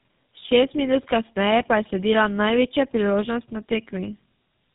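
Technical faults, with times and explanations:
Throughout, tandem speech coding: the call appears to have passed through two low-rate speech codecs in a row, which fits AMR-NB at 6.7 kbit/s followed by GSM full rate at 13 kbit/s, with a G.711 A-law link between them. The second coder had to model speech the first had already smeared, so the errors stack. The speech sounds rough, muffled and warbly, with nothing above 3.8 kHz.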